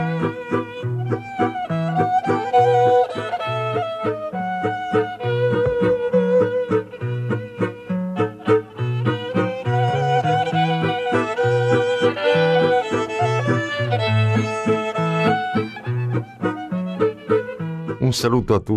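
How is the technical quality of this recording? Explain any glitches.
Nothing stood out as a technical problem on listening, and there are no glitches to explain.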